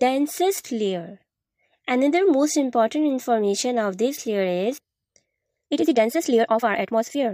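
From 5.6 s to the end of the clip, the audio jumps to about 1.72 times its previous pace while the pitch holds steady, the mark of a time-stretched section. The change is abrupt, and the fast stretch sounds rushed. This is likely software compressing that portion to fit a shorter length, preserving pitch by discarding short fragments of the waveform and splicing the remainder together.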